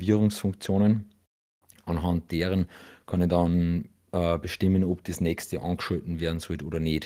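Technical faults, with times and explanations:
No technical faults can be heard in this speech.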